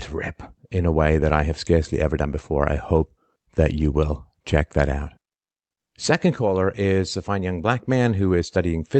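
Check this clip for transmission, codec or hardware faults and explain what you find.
Nothing faulty can be heard in this speech recording.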